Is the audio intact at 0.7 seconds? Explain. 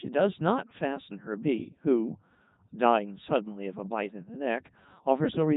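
No. At 0.7 s, as throughout, the speech carries heavy Codec 2 vocoder damage, consistent with its 3.2 kbit/s mode. Only pitch, voicing, energy and spectral envelope survive. The decoder rebuilds the voice from sine waves, so it sounds robotic and buzzy, with nothing above 3.8 kHz.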